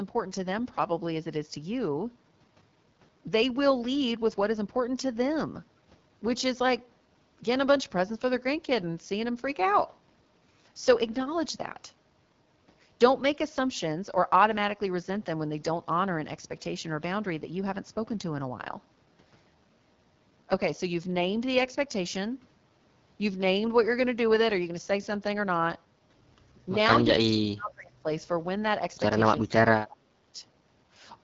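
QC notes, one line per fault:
throughout: AMR wideband (HD Voice) codec. The speech has an obvious rough, raspy, buzzy texture with nothing above 7.4 kHz. The harshness points to one of AMR-WB's lowest modes, around 8.85 kbit/s, where the pulse-based vocal tract model is too coarse.
27.20 to 28.07 s and 29.43 to 30.38 s: speech suppressed in double talk. The voice drops sharply, by about 40 dB and then about 30 dB. This is likely an echo canceller turning down the talker while the far side speaks.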